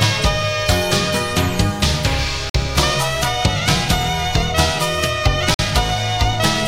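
Two brief holes interrupt the sound, from 2.50 to 2.54 s and from 5.54 to 5.59 s, each about 48 ms of silence. These are gaps between chunks: the audio was handled in 3.0-second pieces, and a short stretch of silence sits at each join before the next piece resumes. Nothing is missing from the sound; it simply pauses and restarts, on a regular grid set by the chunk length.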